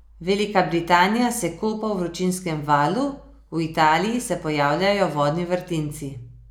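No technical faults are audible.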